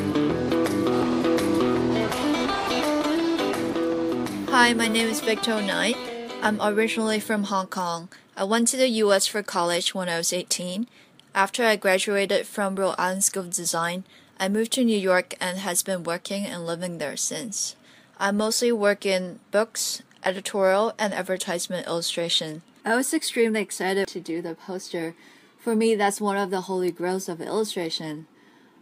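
No technical faults can be heard anywhere in this recording.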